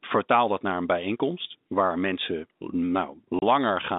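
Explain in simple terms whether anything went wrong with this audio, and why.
One thing went wrong. Near 3.39 s the speech drops out completely for about 30 ms, until 3.42 s. This is packet loss filled with silence. A chunk of sound never arrived, and the receiver played a short hole instead. That points to one lost 30 ms packet. The hole has sharp edges.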